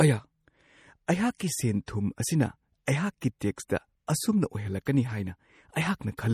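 Throughout, the audio has a watery, swirling quality, with nothing above 18.1 kHz and plainly audible damage, most likely MP3 compression at a low bitrate near 48 kbps, where the encoder zeroes weak frequency lines that flicker between frames.

Short hisses precede sharp attacks at 1.38 to 1.40 s, 1.86 s, 2.86 to 2.88 s, 4.07 s and 4.85 s, each softening the onset. This is pre-echo: quantisation noise spread across a block leaks 13 to 26 ms ahead of the attack.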